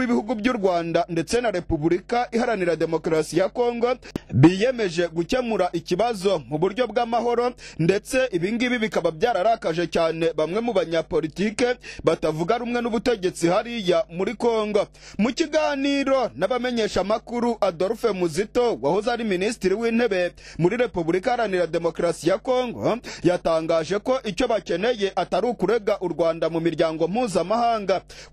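From start to finish, mains hum sits around 30 dB under the sound: a steady 50 Hz tone leaking in from the power line, unlike broadband rumble because its pitch never wavers.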